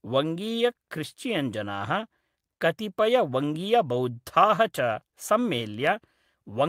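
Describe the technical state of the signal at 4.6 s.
At 4.6 s the speech signal is intact, with no audible technical fault at that point.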